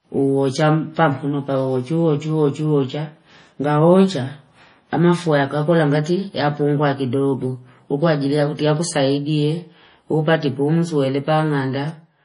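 The speech sounds watery and swirly from start to finish, with metallic chirps on the s sounds, smeared consonant attacks, and nothing at all above 10.6 kHz. This is likely heavy MP3 compression, consistent with a bitrate near 32 kbps, where starved frequency lines flicker between frames.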